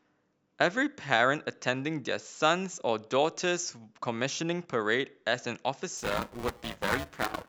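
Buffer tearing affects this speech recording from 5.97 s to the end, adding a rough 375 Hz robotic buzz. Writer and reader have slipped, so about 40% of each period replays audio roughly 7 ms older, which fits a 128-sample buffer.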